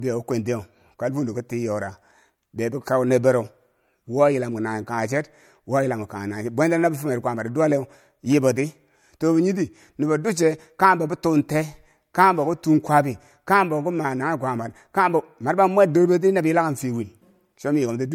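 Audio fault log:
throughout: low-bitrate audio saved at a high bitrate. The speech keeps the coarse, smeared texture of heavy MP3 coding and stops above 18.6 kHz. This likely comes from an encode near 64 kbit/s later re-saved near 192 kbit/s, which cannot restore the discarded detail.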